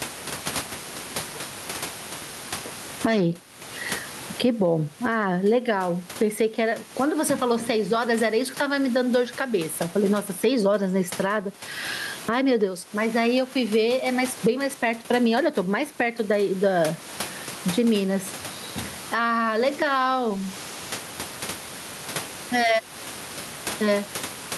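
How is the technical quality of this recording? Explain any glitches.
The recording suffers from gain pumping throughout the clip. Loud and soft parts end up closer in level, with the gain swinging by around 20 dB. The likely cause is gain set far too high at the microphone, with a fast limiter pulling it down on each loud syllable. The result sounds squashed and breathing. A waveform shows flattened peaks and a noise floor that rises between phrases. On a spectrogram, the gaps brighten and then darken abruptly at each onset. The room noise sits about 29 dB below the speech.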